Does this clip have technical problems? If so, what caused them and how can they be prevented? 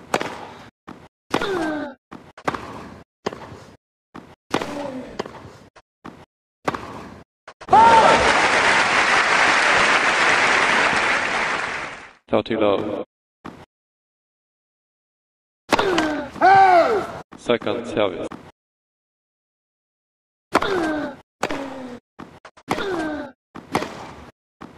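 No technical problems are audible.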